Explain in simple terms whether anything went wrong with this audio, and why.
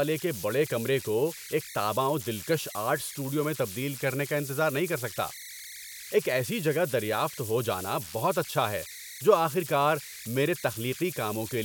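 The recording converter produced converter idle tones throughout the clip. It had no added dither, so on quiet passages it slipped into repeating patterns. You hear a high whistle, around 2 kHz, in the pauses and a grainy hiss beneath the softer speech.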